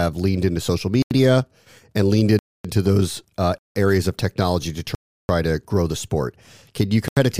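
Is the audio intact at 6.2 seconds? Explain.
Yes, at 6.2 seconds the speech is intact, with no audible fault at that moment.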